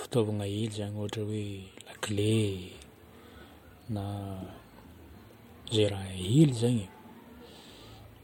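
At 1.92 s the speech and its background noise step up together by about 4 dB and stay at that higher level to the end of the clip. This is a sudden gain jump: the level changes between one sample and the next instead of easing over a ramp. The likely cause is a gain setting or bit shift applied instantly in the digital path. Because the noise floor rises along with the speech, the change reads as a level switch rather than a louder talker.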